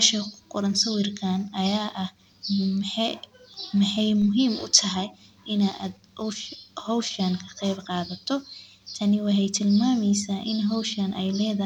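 A DC step at 4.22 s, just before "muhiim utahay in", shifts the zero line by about -34 dBFS, causing a low thump as a 5 Hz high-pass drains the offset away.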